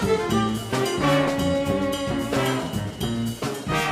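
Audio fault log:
No fault can be heard anywhere in this clip. There is nothing to enter in the log for any part of it.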